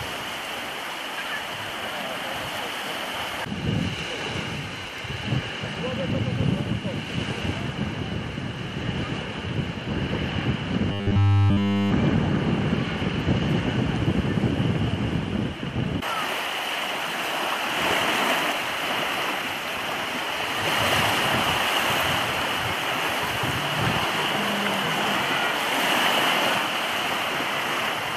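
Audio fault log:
10.92 to 11.92 s, robotic sound from repeated short buffers: for one second the sound collapses into a rigid, metallic buzz pitched at 100 Hz. The likely cause is new audio arriving too seldom, so playback loops the last stretch of data over and over while the real material is skipped. Essentially everything in this span is repetition, and a 100 Hz buzz fits a repeated chunk about 10 ms long.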